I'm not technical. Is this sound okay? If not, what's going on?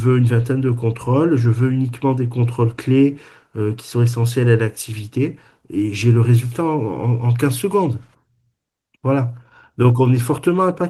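Yes, this sound is okay, and there's nothing going on that needs fixing.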